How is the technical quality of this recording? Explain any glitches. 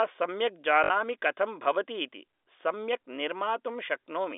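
One glitch stands out in this telephone-band speech, whose G.711 coding keeps everything under about 4 kHz. From 0.84 to 0.9 s there is packet loss with the last packet repeated. About 60 ms of audio, which fits three lost 20 ms packets, is filled by replaying one frame. It stutters robotically, with identical repeating blocks in the waveform and vertical lines on the spectrogram.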